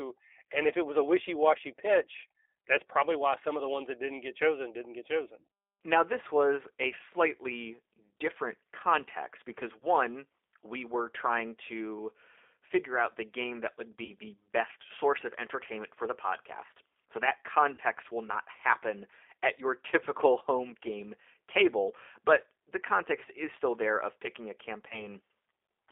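The whole call passes through the G.729 codec at 8 kbit/s, a model-based encoder confined to a 300 Hz to 3.6 kHz line band, leaving speech audibly rough, thin and synthetic throughout. VoIP packet loss concealed by the speech codec then strikes four times: at 9.79 s after "slightly different context because", at 14.05 s after "the game that would" and before "the best source of", at 17.74 s before "will not happen at", and at 24.89 s. The decoder filled 20 ms gaps at 9.79 s and 24.89 s and 40 ms gaps at 14.05 s and 17.74 s, consistent with one and two lost packets. Each gap is patched by extending the last pitch and filter, so the sound smears into a brief, fading stretch, with the voice staying weak or distorted for a moment after packets return.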